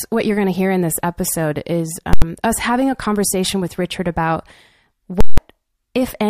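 Right after "in this episode is", at 2.13 s, the speech slams into invalid numbers at full scale for about 85 ms, until "us having a conversation". A calculation went infinite and pinned the output at its limit. You hear a loud pop, silence, then another pop. It happens again from 5.21 to 5.38 s, about 170 ms long. The gap between its two pops is wider, which fits a block twice the size.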